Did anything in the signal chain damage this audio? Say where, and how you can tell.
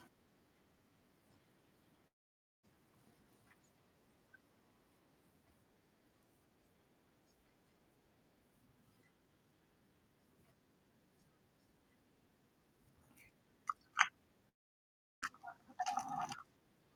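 Yes, a long network dropout, twice: from 2.07 to 2.65 s and from 14.49 to 15.24 s. At each point the speech smears into a short buzzy continuation that fades into near silence, and the talker then resumes with about 0.56 s and 0.74 s of material gone. This is likely packet loss on the network path: the receiver's concealment stretched the last received sound briefly, gave up, and playback skipped past the lost audio when packets arrived again.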